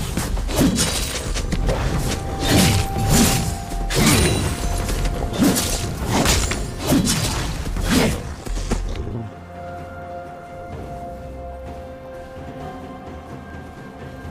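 Every 1.05 s from 0.86 s to 13.50 s a click recurs, likely clock drift buffer slips where a mismatch of around 150 ppm drops or repeats a few samples.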